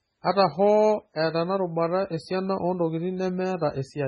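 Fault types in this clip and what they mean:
MP3 compression: The speech sounds watery and swirling throughout, with a metallic, chirpy edge on s sounds and consonant attacks that smear rather than snap, and nothing is heard above about 10.4 kHz. This is likely heavy MP3 coding at a very low bitrate, around what 16 kbps would give: starved of bits, the encoder cuts the treble at a fixed point and drops weak frequency lines that flicker in and out between frames.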